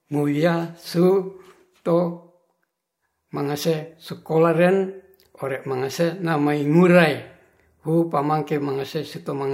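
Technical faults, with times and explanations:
No technical faults can be heard in this speech recording.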